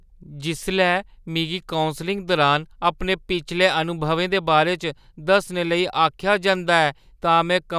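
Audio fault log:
Nothing faulty is audible anywhere in this speech recording.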